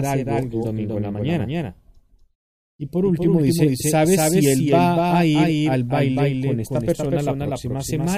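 From start to end, every sound is followed about a fifth of a second later by a flat, slightly quieter duplicate, roughly 5 dB down and full-band, with no reverberant tail. This doubled audio track is likely a second capture through a slower path mixed back in.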